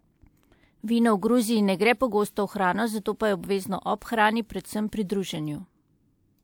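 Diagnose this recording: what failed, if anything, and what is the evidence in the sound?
Two sharp onsets arrive behind a brief smear of hiss: about 40 ms at 3.98 to 4.02 s and 33 ms at 4.89 to 4.93 s. This is pre-echo from the transform codec, whose block-wide quantisation noise spills into the quiet moment before each attack.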